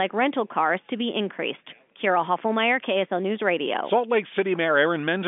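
No technical faults can be heard in the speech, which carries the expected band of G.711 A-law telephone coding, about 200 Hz to 3.5 kHz on the line with nothing above 3.7 kHz.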